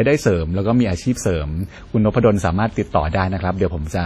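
Speech throughout has a ringing, washy quality, with a hiss that swells and fades with the voice and nothing above 17.7 kHz. This is likely WMA compression at a low bitrate, around 32 kbps, spreading heavy quantisation noise over long transform blocks.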